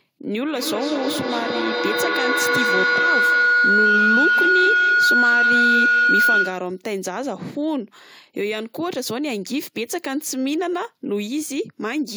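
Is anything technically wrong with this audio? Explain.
Yes. From 0.55 to 6.87 s a feedback howl builds near 1.5 kHz, pulsing roughly every fifth of a second and peaking about 6 dB above the speech. A microphone-to-loudspeaker loop gains level on each trip. On a spectrogram it appears as a bright horizontal band, and the waveform shows a swelling envelope.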